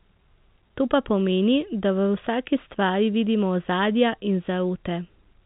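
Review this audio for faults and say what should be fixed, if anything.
Nothing stood out on listening, so there is nothing here that needs fixing.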